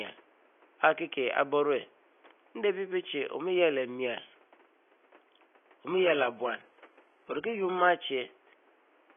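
From 5.89 s to 7.89 s the speech abruptly loses its treble and takes on a thin, synthetic sheen with swirly codec artefacts, then snaps back, with no gap. This is an adaptive stream at a lower bitrate, consistent with a switch from roughly 96 kbit/s AAC to 12 kbit/s HE-AAC. The faint room noise, about 34 dB below the speech, sits underneath throughout.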